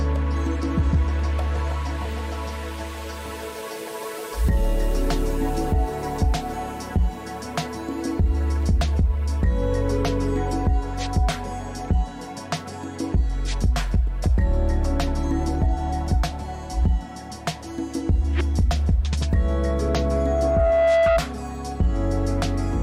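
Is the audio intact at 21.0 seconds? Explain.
No, 21.0 s sits inside a loudspeaker feedback squeal running from 19.19 to 21.22 s. The mic is catching its own speaker and the loop gain tops one at 665 Hz, so that tone swells over about a second and a half into a squeal riding a few dB above everything else.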